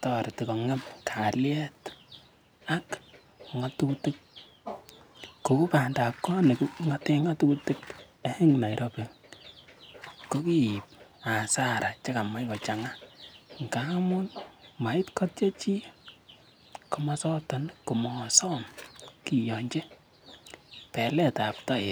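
No audible technical faults turn up anywhere in this recording.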